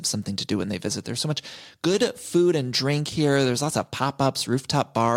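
Nothing in the way of a technical fault turns up anywhere in this bit of speech, so there's really nothing here to flag.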